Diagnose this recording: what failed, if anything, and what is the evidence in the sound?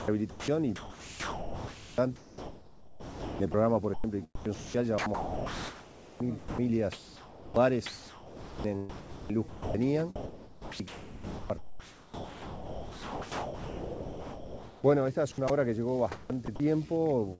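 Sound chopped by the voice detector, at the call-processing stage. From 0.0 to 15.5 s, about 11.2 s of sound drops out into comfort noise, and again from 16.12 to 16.60 s. The likely cause is a sender-side detector toggling transmission, filling the gaps with synthetic background. The G.722 path stops at 8 kHz.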